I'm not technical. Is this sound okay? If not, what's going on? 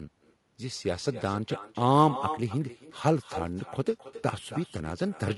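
No. Two faults run through the whole clip.

Echo with no canceller, from start to finish: the speech comes back a second time, roughly a third of a second later, as a quieter, thinner copy trailing each phrase. This happens when the listener on the other end plays the call through a loudspeaker and their microphone picks it up again. Nothing on the call strips that copy out, so it travels back and shadows everything said.

Low-delay AAC compression, also throughout: the voice sounds rough and grainy, with a hiss-like fuzz between the tones and a top end that seems dull or slightly artificial. The likely cause is the low-delay AAC squeezing used for video calls. To keep the delay small, it chops sound into very short slices, which capture the natural ring of a voice poorly. With limited data to spend, the damage here is plainly audible.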